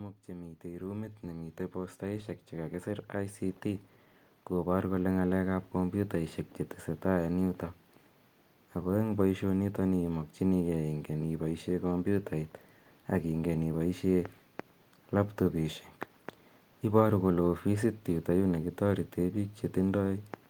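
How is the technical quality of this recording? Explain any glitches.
The recording has one clear fault near the start. From 0.26 to 3.93 s, automatic gain rising: the gain control judged the input too quiet and raised its level by about 11 dB, so speech and background swell together until "kopar kole".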